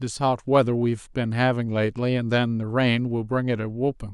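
Speech clip with clock slip clicks running from 0.14 s to 4.12 s: faint ticks recur about every 70 ms, forming a soft rattle. Each tick is a single dropped or repeated sample, likely from two unsynchronised clocks differing by a few hundred parts per million.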